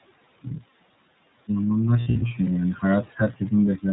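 The noise suppressor artifacts run through the whole clip. It's pulling the steady background down by about 21 dB, so the room noise, sitting about 18 dB under the speech, drops away in the pauses and creeps back under the talking.

The iLBC codec is plainly audible throughout too. Nothing gets past 4 kHz, so it's narrowband, and the speech has that slightly rough, synthetic edge. The sound fits the 30 ms frame mode at roughly 13.3 kbps.

From 2.01 to 2.32 s there are lost iLBC frames, which sounds like about six dropped packets. The losses total 180 ms, scattered across 300 ms, with the longest stretch well under a tenth of a second. The decoder fills each gap with a held, slightly buzzy vowel-like sound, then snaps straight back to the speech.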